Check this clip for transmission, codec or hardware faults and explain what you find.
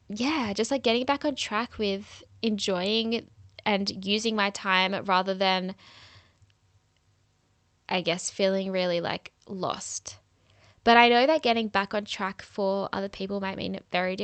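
Nothing faulty turns up in this speech, which carries the ordinary character of a WebRTC call path, with the audio band stopping around 8 kHz in a way that points to an Opus codec in wideband mode.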